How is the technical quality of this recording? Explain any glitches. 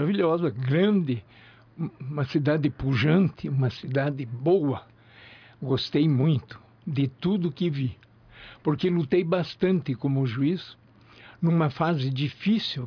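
No glitches or technical faults can be heard anywhere.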